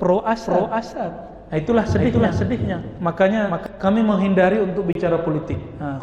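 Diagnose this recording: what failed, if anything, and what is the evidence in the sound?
A doubled audio track runs from 0.46 to 3.66 s, likely from a second, slower capture path or a misaligned edit. A full-band copy trails by about half a second at roughly 5 dB down, with no decay, starting and stopping abruptly. On a spectrogram the same patterns repeat, shifted right, without smearing.

A gap between stream segments occurs at 0.93 s (3.3 ms) and at 4.93 to 4.95 s (23.8 ms), about 4 s apart, which fits 4-second segments whose timestamps leave holes at the network or playback stage. The waveform shows flat silent stretches with hard edges.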